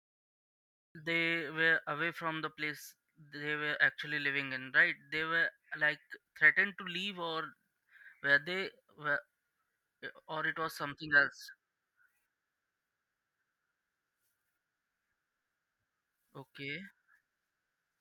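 A speech recording with a cut-off start. The first 0.95 s is digital silence. At 0.95 s the audio begins abruptly, partway through a sound, just before "they were away from". There is no natural attack or fade-in. The recording or stream likely started late, after the speech was already underway.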